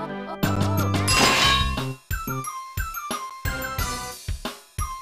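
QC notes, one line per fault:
0.56 s and 3.30 s, block of digital silence: a sharp tick, a tiny hole of about 11 ms. The output buffer likely wasn't filled in time, so a zeroed block, consistent with a 512-sample buffer, cut in with no fade.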